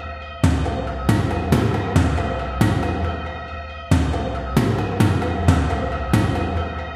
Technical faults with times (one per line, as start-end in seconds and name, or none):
5.41-5.46 repeated frames